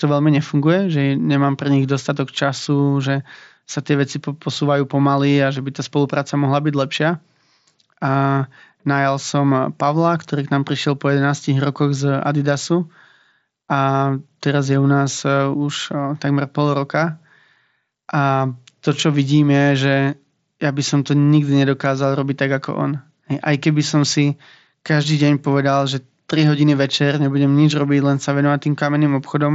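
Nothing stood out on listening to this speech, which comes over a Bluetooth mSBC headset link with the expected wideband ceiling near 7.7 kHz.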